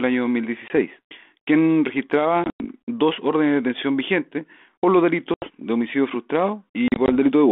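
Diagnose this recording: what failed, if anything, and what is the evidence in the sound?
Hard-edged holes of silence break the speech at 0.68 s, 2.44–2.66 s, 5.34–5.62 s and 6.88–7.10 s, each followed by a brief, slightly distorted return. This is network packet loss on the 32 kbit/s G.726 ADPCM call. The decoder's adaptive predictor and step size drift from the sender's across each gap and take some tens of milliseconds to recover.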